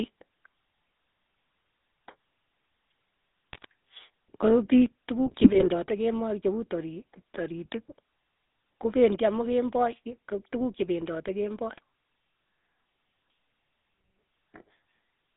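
GSM full-rate codec damage runs through the whole speech clip: the voice has the buzzy, gravelly roughness of the 13 kbps GSM coder, which rebuilds speech from a vocal-tract filter driven by a sparse, regularly spaced pulse excitation. The band is confined to roughly 200 Hz to 3.7 kHz, so everything above is gone and the voice sounds narrow and boxed-in. GSM bit errors break through at 3.53 to 3.66 s, at 5.26 to 5.67 s just before "kemoi che uu tori", and at 11.70 to 11.79 s. In each burst, corrupted filter, pitch or gain values reach the decoder, so the spectrum bends and the level jumps for individual frames, turning the voice into brief squawks, pops and gargling; the middle burst is the longest and most damaged. Microphone volume stepped down is heard at 5.88 s, before "kemoi che uu tori", and again at 9.15 s, before "amu kemboi": voice and background both drop suddenly by about 3 dB in a single step. 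This is likely the call software's automatic gain control lowering the device input volume after judging the microphone too hot.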